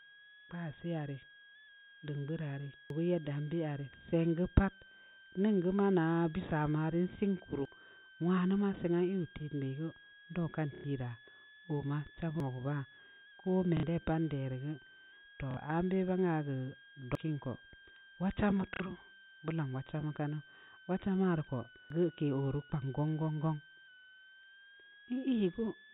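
Throughout the speech, a switching supply whistle sits about 25 dB below the signal: a high tone near 1.5 kHz, wandering between roughly 1.46 and 1.73 kHz, as a power supply's burst-mode oscillation leaks into the audio path.

At 2.90, 7.65 (just before "nwanu maa seng aah"), 12.40, 17.15 and 21.90 s, the sound abruptly jumps forward, losing around a third of a second each time. The steady 4.75 s spacing points to audio missing between chunks, likely from 5 s recording blocks whose ends are butted together without a gap.

Packet loss with the last packet repeated appears at 10.75–10.84 s, right after "ndau kan", then at 13.77–13.83 s, 15.51–15.57 s, and 18.74–18.80 s after "wad chamba". Each run of 90 or 60 ms fits lost 30 ms packets replayed in place, producing a brief buzzy, robotic stutter.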